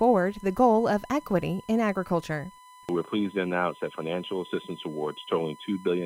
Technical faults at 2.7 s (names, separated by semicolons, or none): USB whine